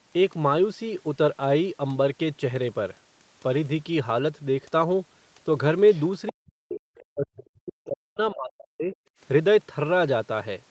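Other side's voice leaking through, at 5.93 to 6.02 s and again at 6.27 to 6.33 s and 6.71 to 6.8 s: brief scraps of a second voice, the first very faint at about 30 dB below the speech and the later two louder at about 15 dB below, likely loudspeaker playback that the echo canceller failed to remove from the microphone.

Speech suppressed in double talk, from 6.3 to 8.94 s: the talker's speech dips and drops out in pieces, falling by as much as about 40 dB over roughly two seconds in total, likely because the echo canceller could not separate the talker from the echo and attenuated both.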